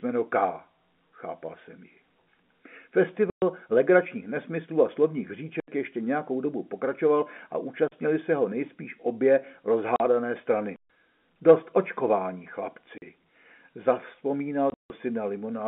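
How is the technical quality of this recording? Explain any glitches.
The recording is interrupted by seven hard dropouts of two kinds, all heard through the narrow band of G.711 telephone coding, which passes roughly 200 Hz to 3.4 kHz.

Packet loss filled with silence occurs at 3.30 to 3.42 s (120 ms), 9.96 to 10.00 s (40 ms), 12.98 to 13.02 s (40 ms), and 14.7 to 14.9 s. Packets never arrived, and the receiver inserted silence rather than concealing the gap. The hole lengths step in 20 ms units, which fits 20 ms packets. The speech drops out abruptly. The last burst is scattered over about 200 ms, with a longest run of 160 ms.

A block of digital silence appears at 5.60 to 5.68 s (80 ms), 7.88 to 7.92 s (40 ms), and 10.76 to 10.88 s (120 ms). In each case a stretch of samples went out as zeros, which points to the output buffer not being filled in time. The audio cuts straight to dead silence and back without any fade. 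The gap sounds like a short hole in the speech.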